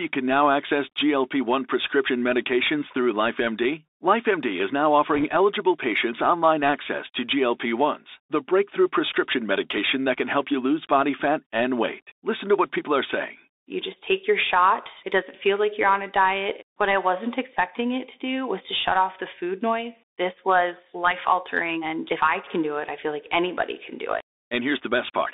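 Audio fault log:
throughout: Bluetooth CVSD headset codec. Muffled, scratchy speech over a granular hiss, band held near 300 Hz to 3.7 kHz; one-bit slope coding fits a 64 kbps headset link.
5.14 to 5.25 s: bit errors on a Bluetooth voice link. After "is now", a brief rushing crackle before "eligible patients online access"; a couple of percent of bits flipped, smearing without loud clicks.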